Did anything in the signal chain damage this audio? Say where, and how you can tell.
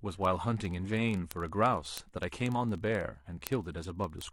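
Yes. The damage is at the digital interface between devices, and it runs from 0.11 s to the end of the speech. A steady train of word clock ticks sits under the audio, one roughly every 30 ms, around 150 in all. The receiver was running on its own clock instead of locking to the sender's. With the two rates apart by something like 700 ppm, the clocks slip past each other constantly, and each slip drops or repeats a single sample. That discontinuity is what you hear as the tick.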